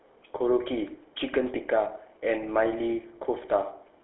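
Speech run through a GSM full-rate codec, its pulse-excited vocal-tract model fitting a 13 kbps coder, leaves a plainly audible buzzy, gravelly roughness throughout, with nothing above 3.9 kHz.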